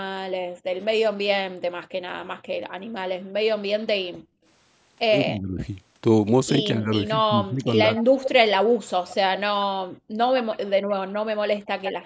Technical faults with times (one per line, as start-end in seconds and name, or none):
0.01-4.44 background gated by the echo canceller
5.23-5.59 speech suppressed in double talk
6.76-7.98 speech suppressed in double talk
7.96-9.16 echo leak
9.88-10.17 background gated by the echo canceller
10.36-12.05 echo leak
11.48-11.69 background gated by the echo canceller